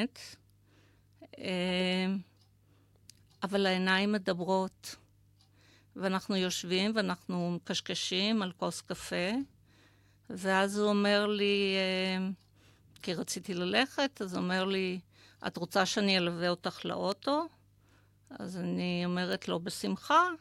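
A flipped bit in memory or on a digital link produces a bit error spike at 17.12 s, a few samples long, and again at 19.33 s, a single sample. Each value leaps by a power of two, reaching about -21 dBFS, then snaps back, heard as a sharp, broadband tick unrelated to the speech.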